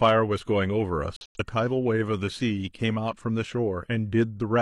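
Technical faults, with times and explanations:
0.04–0.11 s, hard clipping: a gain stage was driven about 2 dB past what it could pass, so the speech peaks were sliced flat. Those squared-off tops add high harmonics, heard here as a brief crackle on peaks at the very start.
1.16–1.40 s, corrupt frame muted: damaged bits in the compressed stream made the decoder reject a run of frames, and the player filled the gap with silence. The speech drops out abruptly for about 0.23 s, which fits four lost frames, then resumes on time.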